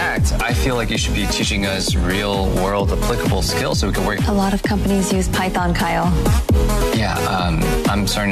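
At 0.40 s compressed frames are skipped: a run of encoded frames never reaches the output, and the audio jumps forward by something like 150 ms, which fits about seven frames of roughly 23 ms each. No silent gap is left. That distinguishes it from a buffer dropout, which inserts silence or a hard discontinuity.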